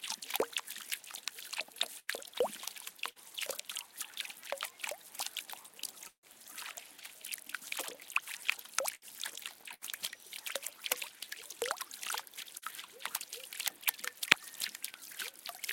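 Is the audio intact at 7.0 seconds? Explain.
Yes, at 7.0 seconds the sound plays through intact, with no dropout, click, distortion or other fault.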